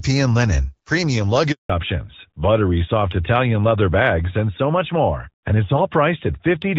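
Right after "linen premium", at 1.52 s, there's a handover gap: the call was being passed from one network to another, and no speech frames came through during the switch. The sound cuts out and stays silent for 180 ms, until 1.70 s when the new link picks up. Whatever was said in that stretch is simply gone rather than garbled, so you hear a clean hole in the speech.

From 1.70 s to the end, there's a fallback to narrowband. Before the gap, the speech has the fuller HD Voice sound, with only light coding wear, which points to AMR-WB at around 12.65 kbit/s. After the switch, nothing above 4 kHz gets through, which fits the older AMR-NB codec at around 12.2 kbit/s. The speech loses its top end and sounds duller, and it picks up a rougher texture too.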